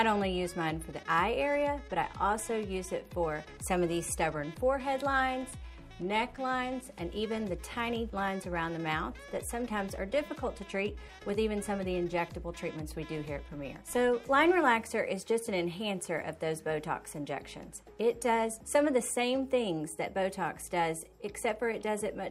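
No technical faults can be heard anywhere in this recording.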